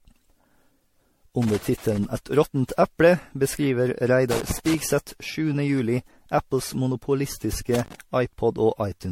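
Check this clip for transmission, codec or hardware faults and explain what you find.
Two faults are present: a smeared, hollow coding character across the whole clip, and three bursts of connector crackle.

Generation loss runs throughout: the speech sounds swirly and hollow, consonant attacks are blurred, and nothing remains above 16.5 kHz. The likely cause is roughly ten successive lossy re-encodes, which fits MP3 at around 64 to 70 kbit/s, each pass re-quantising on a shifted frame grid so noise and spectral gaps accumulate.

Loose connector crackle breaks in from 1.42 to 2.05 s, from 4.31 to 4.80 s, and from 7.74 to 7.95 s. A worn or dirty contact rapidly makes and breaks, chopping the signal and popping on any DC, heard as irregular scratchy crackle over the speech.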